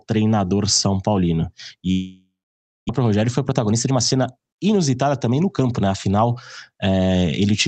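From 1.91 to 2.91 s the sound decays into a fading buzz or hiss, then about 0.6 s of silence, and resumes with material missing, likely a long network dropout rather than a brief packet loss. From 2.99 to 5.95 s a jitter buffer speed-up trims roughly 0.4 s, running at 112% with pitch unchanged, unlike simple resampling.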